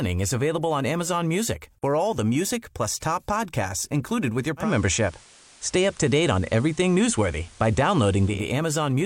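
A speech recording in which, from 4.57 s to 8.45 s, a soft hiss rises to around 30 dB below the speech, and the level shifts by about 3 dB. This is digital radio blending to analogue: the receiver lost its digital stream and cross-faded over 192 ms to the station's FM broadcast, then faded back to digital at 8.45 s.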